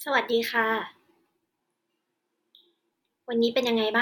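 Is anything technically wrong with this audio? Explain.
Yes. From 1.62 to 2.90 s the speech turns roomy and hollow with thinner bass at a similar level, noise roughly 35 dB down. This sudden change likely means a switch to a distant microphone.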